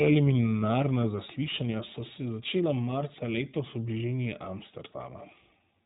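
From start to finish the speech runs through the iLBC codec, and the damage is plainly audible. Everything above 4 kHz is gone, so the sound is boxed-in telephone band with dull sibilants. The texture is slightly rough and synthetic, and each 20 ms frame's excitation is coded on its own without borrowing from the previous one. That fits a 15.2 kbps narrowband VoIP stream, and you get that rough, processed edge throughout.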